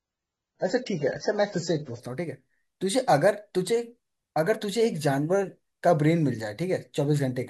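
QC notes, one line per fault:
0.0–2.0 s, adaptive stream starting at a low bitrate: the player opened on a low-quality rendition before measuring the connection, then switched up seamlessly. Until 2.0 s nothing sounds above 7.9 kHz and codec artefacts are stronger, fitting 16 kbit/s AAC stepping to 96 kbit/s.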